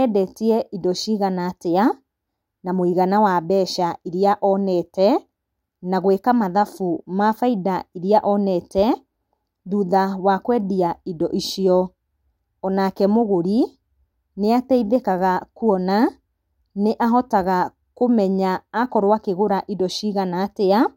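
No audible technical faults anywhere in this speech recording.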